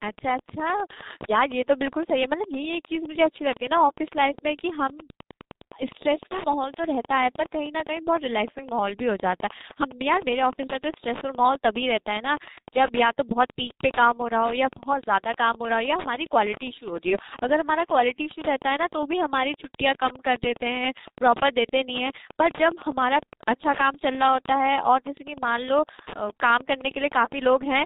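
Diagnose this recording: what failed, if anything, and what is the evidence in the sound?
Wi-Fi interference runs through the whole recording, in the analogue wiring. A steady tick about ten times a second, one every 102.4 ms, sits well below the speech. A nearby Wi-Fi radio's beacon bursts are being picked up and rectified by the audio circuit, turning radio pulses into audible clicks.

The G.723.1 codec, also present throughout, damages the speech heavily. Nothing above 4 kHz survives, so the speech is muffled, hoarse and smeared at the consonants, which fits a bitrate of about 6.3 kbit/s. The codec codes 30 ms frames with a slowly updated voice model that cannot track fast sounds.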